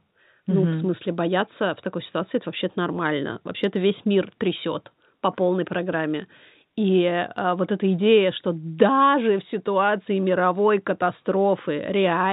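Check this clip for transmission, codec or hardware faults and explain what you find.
Two bit error spikes are present in this speech, one at 1.60 s and another at 6.85 s. The audio is band-limited to 4 kHz, which fits G.711 A-law telephone coding at 64 kbps.

The first spike comes right after "в смысле" and before "в такой ситуации это". The second follows "трясет по полной программе" and precedes "а вот эта идея". Each is a single corrupted sample. One flipped bit throws the value off by a power of two, and the next sample is back to normal. Each is heard as a sharp broadband tick that has nothing to do with the speech.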